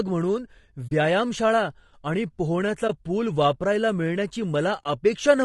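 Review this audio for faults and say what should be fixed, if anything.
Throughout, the speech sounds rough and grainy, with noise between harmonics and a thin top band, likely low-delay AAC compression at a low bitrate, around 32 kbps. Raise the bitrate or use a codec mode with longer frames.

AAC frame loss with muting produces soft-edged dropouts at 0.87–0.92 s (40 ms) and at 2.87–2.90 s and 4.84–4.86 s (20 ms each). Each fades out and back in as overlapping windows cover the zeroed frames. Add packet-loss concealment or forward error correction to the transport.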